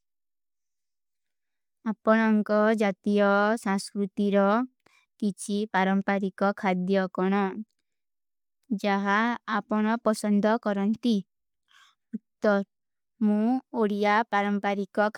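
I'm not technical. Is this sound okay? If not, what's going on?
Yes, nothing in this recording is broken: no dropouts, glitches or distortion anywhere.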